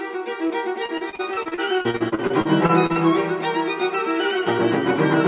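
From 0.47 to 3.02 s the sound breaks up with repeated packet loss, the robotic sound of a call whose packets keep arriving late or not at all. About twenty short holes, none longer than 36 ms, are each patched by stretching the preceding sound, so roughly a fifth of that stretch is concealment. It comes across as choppy, with pieces missing. On a spectrogram, already empty above 4 kHz from the G.711 call path, the stretch shows repeated, smeared copies of the same frames, and the waveform shows flattened, looped segments.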